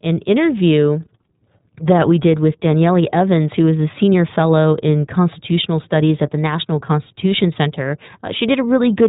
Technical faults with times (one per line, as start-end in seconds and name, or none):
0.00-9.08 iLBC codec